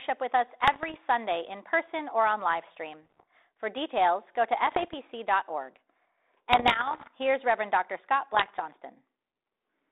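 Bit errors on an ADPCM link hit the speech five times: 0.64 to 0.97 s, 3.02 to 3.23 s, 4.67 to 4.94 s, 6.52 to 7.09 s and 8.33 to 8.61 s. The error rate is roughly half a percent to one and a half percent. Each flipped bit throws off the decoder's step size and prediction, so the damage rings on briefly as pops, gritty bursts and sudden level jumps. The 6.52 s burst is the longest. On the waveform these show as spikes and abrupt envelope steps. On the spectrogram they are vertical broadband streaks, capped near the 3.7 kHz line band of what sounds like a 32 kbit/s G.726 link.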